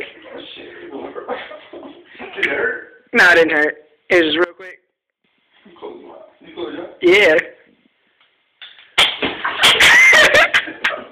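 From 4.44 to 5.24 s the sound drops by about 23 dB to a thin residue, likely one channel inverted, so the shared content cancels when summed.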